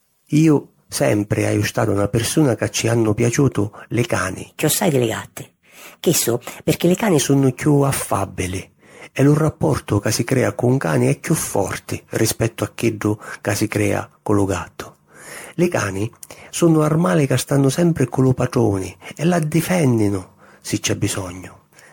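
From the first second to the last, the speech has that swirly, hollow, smeared quality of generation loss. The likely cause is repeated MP3 encoding, with the sound pointing to something like ten passes at around 96 kbit/s. Each decode and re-encode lands on a shifted frame grid, so quantisation noise and spectral gaps pile up. Consonant attacks go soft, the top end stops near 19.9 kHz, and there's a watery shimmer around everything.

Then, right after "ci hannu piaciutu li", from 4.48 to 7.19 s, there's a section at the wrong speed. That stretch runs 1.18 times too fast, so it comes out hurried and roughly three semitones high, before snapping back to normal at "sunnu chiù affàbbili e". Pitch and tempo shift together, which is what you get when a piece of audio is likely played against the wrong clock rather than time-stretched.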